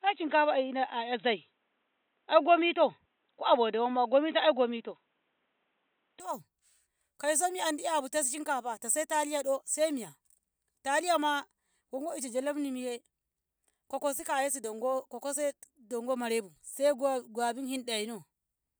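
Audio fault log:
0.0–6.2 s, input switched to a poorer device: The speech sounds dull and boxy, with nothing above 3.9 kHz. At 6.2 s it clears up at once, with no gap at the change. The level also shifts by roughly 5 dB. A faint background noise sits far below the speech during this stretch. The likely cause is the system recording from a narrower-band microphone or headset call profile first, then changing to the better input.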